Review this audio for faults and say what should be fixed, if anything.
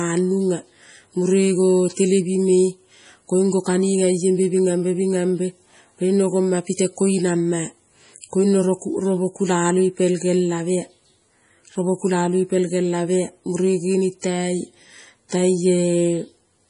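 Throughout the speech there is a watery, swirling texture and a dull top end with nothing above about 10.5 kHz. This is likely heavy MP3 compression at a low bitrate, which fits around 32 kbps. Starved of bits, the encoder cuts the treble and lets weak frequency lines flicker on and off between frames. To prevent it, keep the audio uncompressed or encode it at a much higher bitrate.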